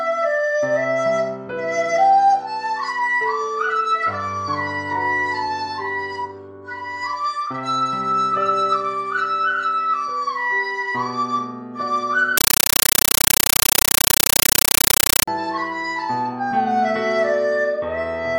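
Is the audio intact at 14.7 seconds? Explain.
No. From 12.37 to 15.28 s, a compressed stream is played as audio: undecoded AC-3 data sounds like loud chattering static, showing as 9.33 ms noise bursts repeating 31.25 times a second.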